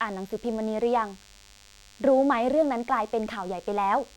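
A thin DECT cordless phone buzz runs under this speech throughout, roughly 30 dB down, repeating at 100 Hz as radio bursts rectify; its harmonic-rich rasp distinguishes it from smooth mains hum.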